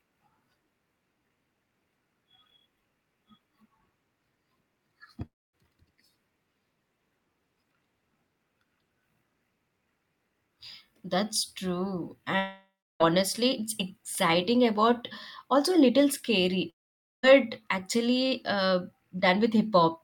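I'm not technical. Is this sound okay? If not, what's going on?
No. Long network dropouts at 5.25 to 5.55 s, 12.39 to 13.02 s and 16.70 to 17.25 s: the speech briefly turns to a fading buzz or silence, then resumes with that part missing, likely because the connection stopped delivering audio.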